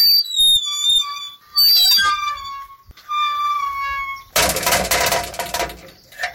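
From the start to 1.0 s the sound is driven into hard clipping, pushed roughly 15 dB past what the signal path can carry, so every peak is sliced flat. The squared-off tops throw energy into harmonics high in the spectrum, and with overload this deep the result is a harsh fuzz on each loud moment rather than occasional crackle. It returns from 1.58 to 2.13 s and again from 4.36 to 5.63 s, both times about 17 dB over.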